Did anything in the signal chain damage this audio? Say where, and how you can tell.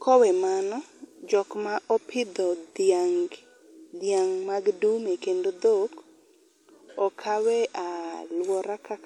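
Yes: throughout, the speech sounds swirly and hollow, with smeared consonant attacks, despite content reaching 20.1 kHz. This points to generation loss at the codec stage, likely from about four lossy re-encodes that fit a WMA chain near 96 kbit/s, each pass adding quantisation noise and spectral holes.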